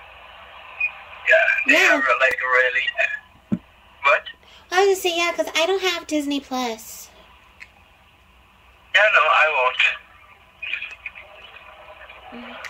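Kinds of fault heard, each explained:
Electrical switching spike: at 2.31 s a sharp snap lasting only a few milliseconds sits on top of the sound, peaking fairly hard at around -10 dBFS. It is most likely a nearby switch, relay, motor or static discharge arcing and coupling a brief burst of energy into the audio line, which is why it appears as an added transient rather than a break in the underlying audio.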